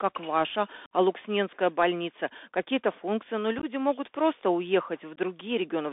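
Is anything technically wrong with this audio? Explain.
Yes. The Bluetooth CVSD headset codec runs throughout. This one-bit delta modulator at 64 kbps steps its estimate up or down each sample over a narrowband voice path that confines the speech to about 250 Hz–3.6 kHz; it leaves a granular hiss, and makes loud bright sounds scratchy where the step size can't keep up.

Unconcealed Bluetooth headset packet loss occurs at 0.86–0.92 s, 3.59–3.64 s and 5.16–5.18 s. Short voice packets never arrived and nothing filled the gaps. The first hole is 52.5 ms, roughly fifteen packets. The second is 26 ms of loss scattered over 45 ms, with the longest run 15 ms, so it sounds choppy. The third is a 15 ms dropout. All have abrupt edges.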